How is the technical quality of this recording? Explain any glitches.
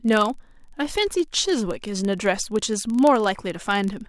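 The quality suffers from one steady glitch across the whole speech clip: a block size mismatch with padding. Each block comes up slightly short and is topped up with zeros, so a tiny gap repeats at about 23.4 Hz, which fits a 1024-sample block. That gives a low buzz, while speed and pitch stay essentially normal.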